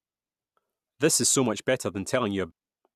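Right near the end, from about 2.50 to 2.52 s, there's a brief glitch in the speech. That's damaged data in the compressed stream: some of the data got corrupted, the decoder misread the frame there, lost sync and had to hunt for the next valid header before carrying on.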